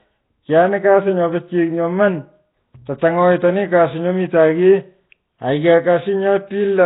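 The speech in this clip has most likely been through Nellymoser compression, the old Flash microphone codec, at a rate that fits roughly 16 kbps. Its fixed, sparse bit budget leaves weaker frequency bands with no bits, so those bands are refilled with synthetic noise. Throughout the clip this produces a rough, hissy halo around the speech and a smeared, underwater quality, with heavy damage overall and nothing above about 3.8 kHz, which leaves the top end dull and band-limited.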